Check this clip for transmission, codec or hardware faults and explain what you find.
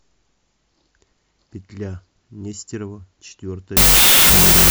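One fault appears at the end: a wrong sample width from 3.77 s to 4.71 s. Audio stored as 32-bit float is read as 16-bit integers, so each original sample splits into two mismatched values. The speech turns into loud noise with the voice faintly buried inside, playing at half speed and pitch. That slowdown distinguishes it from a byte-order error, which leaves speed and pitch unchanged.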